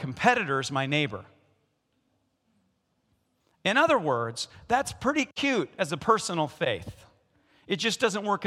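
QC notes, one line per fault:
No faults found in this clip.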